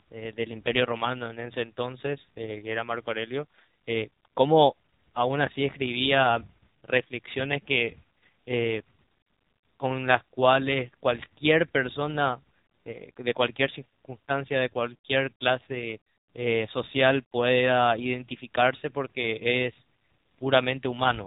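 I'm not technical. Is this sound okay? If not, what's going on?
No, the speech runs through the AMR narrowband mobile codec for the whole clip, so it sounds like an old phone call. Everything above about 3.8 kHz is gone, making it muffled, and squeezing it this hard leaves it plainly buzzy and robotic.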